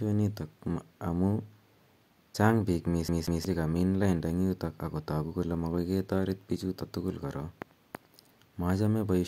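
CD stuck on one turn, 3.08 to 3.45 s, after "chang' piik": a 0.18 s slice of speech repeats twice, briefly muting at each jump before "che kamin lainda".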